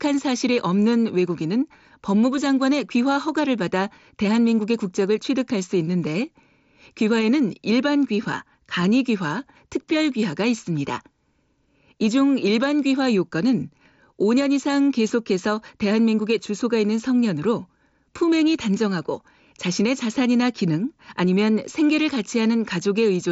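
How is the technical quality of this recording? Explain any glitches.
Nothing in this speech recording stood out as a glitch or technical problem on listening.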